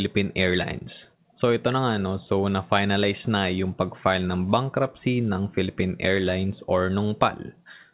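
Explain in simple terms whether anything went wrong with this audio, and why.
Nothing went wrong with this audio: the speech simply went through the normal processing of a phone call, which is expected.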